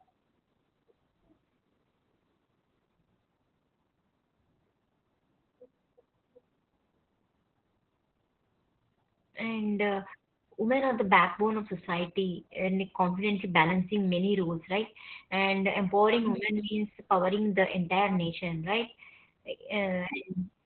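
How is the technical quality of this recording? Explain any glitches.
Quality is poor, and it's down to one problem that runs the whole way through: heavy Opus voice compression. From start to finish the speech is boxed into a narrow band, with nothing above about 4.2 kHz, so it sounds muffled and phone-like. That's the SILK speech coder working in narrowband, which points to a very low bitrate, around 8 kbps. It models the voice coarsely, so you hear a hoarse, slightly robotic edge on the speech.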